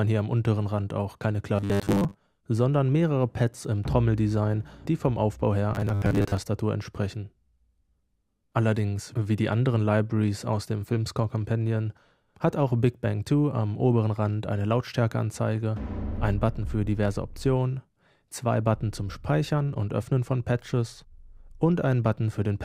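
From 1.56 to 2.21 s and again from 5.75 to 6.39 s there's robotic sound from repeated short buffers: a rigid 100 Hz buzz, likely from 10 ms chunks being looped.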